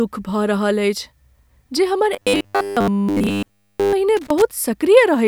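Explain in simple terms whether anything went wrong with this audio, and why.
Two problems can be heard in this speech.

From 2.14 to 3.93 s the voice turns into a rigid, metallic buzz, a fault called robotic sound from repeated short buffers. The likely cause is audio arriving too slowly, so the player fills each gap by replaying the same tiny 10 ms slice over and over, which forces a steady 100 Hz hum onto everything. Nearly the whole stretch is made of these repeats. Unlike a simple dropout, the sound never goes silent. It keeps a machine-like drone that loosely follows the speech.

From 4.17 to 4.42 s there is a quarter-second burst of scratchy crackle, known as loose connector crackle. A worn or dirty plug or socket keeps making and breaking contact, chopping the signal into ragged bits. What separates it from the robotic buzz is that it has no steady pitch. It is irregular and rough, like static, and it comes in a short burst rather than a sustained tone.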